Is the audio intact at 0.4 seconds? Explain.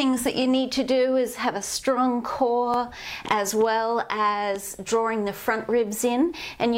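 No. From 0.42 to 0.44 s a short stutter is heard, with a hard join where a 23 ms piece plays a second time. This is a repeated buffer: new audio arrived late, so the last block, which fits a 1024-sample buffer, played again.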